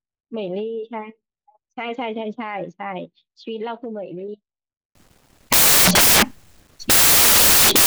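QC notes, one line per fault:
4.95–7.86 s, samples built from the wrong bytes: the speech gives way abruptly to loud, harsh broadband noise through to the end, as bytes within each sample are misassembled and the rapidly changing low-order bits dominate.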